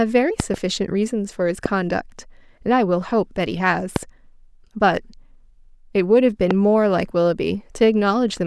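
A speech recording interrupted by five loud pops. The first event runs from 0.40 to 0.56 s and holds two pops in quick succession. Single pops follow at 1.66 to 1.68 s, 3.96 to 3.98 s and 6.51 to 6.53 s. Each jumps roughly 15 dB above the speech. The speech carries on underneath without a break. The likely cause is a sudden voltage pulse, from a plug, a switch, static or a driver glitch, added to the signal.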